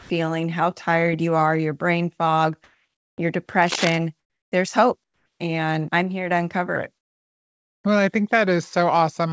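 A speech recording where the pauses at 0.0 to 0.10 s (before "how tired you are"), 2.64 to 3.18 s, 4.20 to 4.52 s (before "there's hope") and 5.04 to 5.40 s turn into a flat, featureless hiss, shifting by about +5, +3, −11 and −8 dB. This is likely comfort noise in place of the background, synthesised during discontinuous transmission. From 3.62 to 3.99 s a dense, uneven scratching sits over the sound at roughly 5 dB below the signal, likely cable scratch noise from a worn connector being moved. After "I'm here to uncover", from 6.76 s to the end, everything turns deep and slow, about three semitones low at 0.859 times speed, likely a section at the wrong speed, played against the wrong clock. Throughout, nothing is heard above 8 kHz, which fits the G.722 wideband codec on the call path.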